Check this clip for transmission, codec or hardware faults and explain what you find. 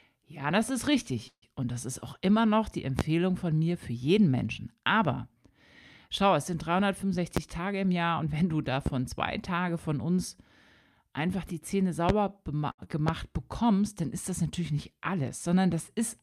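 The clip has five kinds of fault: a call audio freeze, loud pops, jitter buffer speed-up, a short stall and a short concealed packet loss.

From 1.27 to 1.44 s, just after "das ist", there is a call audio freeze. The last sound hangs on and fades, with about 60 ms of silence. Then "und das ist auch" resumes where it stopped. This likely comes from delayed packets draining the jitter buffer. It inserts a 148 ms gap, and nothing is lost.

Loud pops land at 2.99–3.02 s, 7.37–7.40 s, 8.86–8.89 s, 12.09–12.12 s and 13.08–13.12 s. The first falls between "auch immer noch die" and "von mir für jeden". Each is a single sharp click, about 20 dB above the speech, or about 15 dB at 8.86 s. The likely cause is a voltage spike from a connector, switch or driver glitch. The speech continues underneath.

Jitter buffer speed-up hurries the speech twice. After "schau es sind", from 7.02 to 7.18 s, it runs at 125% speed and drops around 50 ms. 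From 7.59 to 8.54 s it runs at 110% and drops around 100 ms. Short pitch-period slices are cut out to shrink excess buffering, so pitch stays unchanged.

A short stall from a late packet occurs from 12.71 to 12.80 s. A packet arrived late, so the receiver stretched the current sound by 69 ms until it came. The sound is held too long with a slight buzz or dip, then carries on with nothing missing.

Short concealed packet loss follows at 12.84–12.88 s. About 40 ms of audio never arrived in time. The receiver patched the gap by extending the preceding sound and blending back. It is heard as a brief smear.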